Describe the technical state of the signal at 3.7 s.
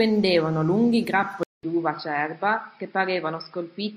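At 3.7 s the speech is band-limited, with nothing above 5.3 kHz and new faint background noise, since a gap of 0.2 s at 1.43 s. That's likely an input switched to a poorer device, and it stays dull to the end.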